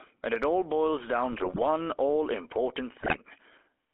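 A speech recording runs through the GSM full-rate codec from start to finish. The band is limited to roughly 300 Hz to 3.4 kHz. The voice has a plainly audible buzzy, gravelly texture. That roughness comes from the coder's coarse pulse excitation, which fits a 13 kbps full-rate link. GSM bit errors break in twice, from 1.32 to 1.65 s and from 2.98 to 3.18 s. Corrupted filter, pitch and gain values reach the decoder. The voice turns to squawks, pops and gargling, which suggests a run of damaged frames each time.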